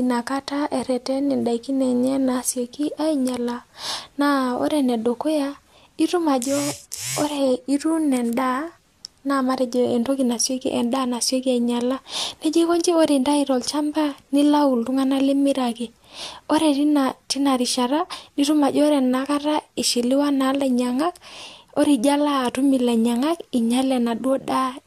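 No technical faults are audible.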